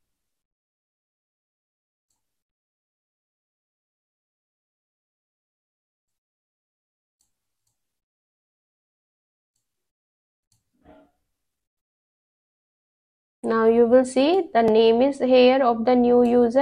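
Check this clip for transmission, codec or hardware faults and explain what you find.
One fault turned up. At 14.68 s there's a block of digital silence, about 2.2 ms long, probably a late buffer fill, so it lands as a tick or dip.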